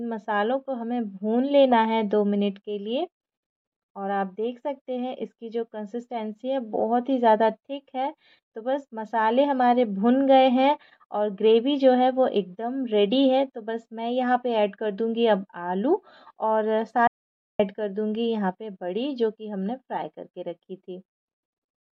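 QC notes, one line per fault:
17.07–17.59 s, audio dropout to silence: the sound cuts off mid-flow and returns about 0.52 s later, with the gap holding silence and no room tone. The likely cause is input lost to a link or device fault while recording continued writing silence.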